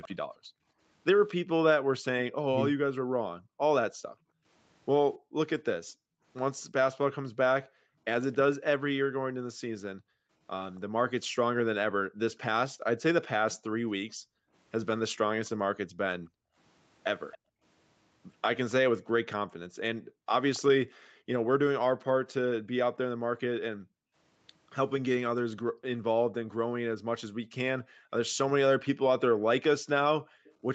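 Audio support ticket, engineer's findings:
Echo leak: faint delayed copy of the far-end voice at 0.01–0.15 s, 8.32–10.8 s, 17.32–20.59 s and 30.44–30.54 s, lagging 274 ms at about 20 to 35 dB below speech. Likely residual echo: far-end loudspeaker pickup not fully removed by the echo canceller, returned upstream.

Background gated by the echo canceller: room tone pumps from 0.37 s to the end of the clip, dropping up to about 40 dB while the loudspeaker plays and recovering on release. Canceller's suppressor clamps the mic gain hard during far-end activity.

Speech suppressed in double talk: near-end speech dips deeply, roughly 40 dB, for around 0.3 s within 2.39–2.8 s while both sides talk. Likely cause: the echo canceller cannot separate local speech from echo and attenuates both.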